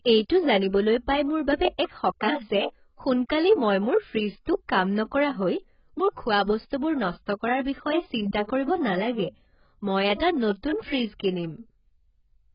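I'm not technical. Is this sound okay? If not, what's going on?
No. AAC compression damage runs through the whole clip. The speech sounds dull and smeared, with nothing above 5.1 kHz, and hissy sounds turn fizzy or warbly. The likely cause is very heavy squeezing, where the encoder throws away treble and fine detail to save space.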